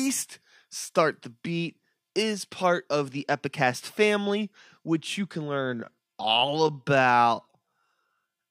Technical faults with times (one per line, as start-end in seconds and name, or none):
5.51-8.51 time-stretched section